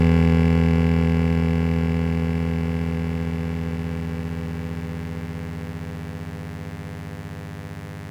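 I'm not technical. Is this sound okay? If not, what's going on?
No, there's a mains buzz running under the music the whole way through: electrical interference from 50 Hz power leaking in, heard as a steady, raspy buzz.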